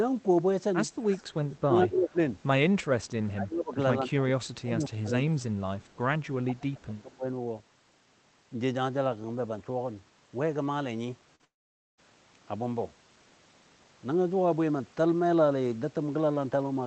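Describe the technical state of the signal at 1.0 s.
At 1.0 s an echo leak is audible from 0.94 to 1.34 s: a faint copy of the speech returns 172 ms late, about 20 dB down, likely from a far-end loudspeaker that the echo canceller didn't fully suppress. Unlike room reverberation, it is a discrete repeat rather than a smooth decay.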